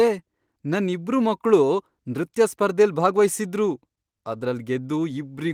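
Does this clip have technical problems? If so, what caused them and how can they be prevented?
No technical problems here.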